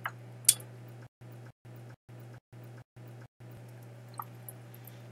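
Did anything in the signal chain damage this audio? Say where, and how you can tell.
Yes. From 1.07 to 3.57 s there is a stutter with silent gaps: a 294 ms fragment repeats six times, each followed by 145 ms of digital silence, on a steady 438 ms cycle. This likely points to a stalled playback or stream buffer replaying its last fragment, so the intervening audio is lost.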